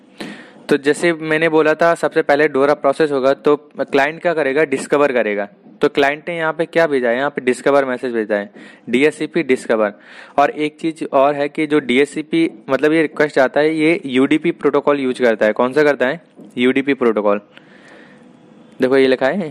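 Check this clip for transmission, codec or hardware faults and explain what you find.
Sample clock jitter runs through the whole clip. The converter's clock wobbles by a fraction of a microsecond, mistiming samples on steep waveform slopes, leaving faint roughness roughly 55 dB down that follows loud, bright passages.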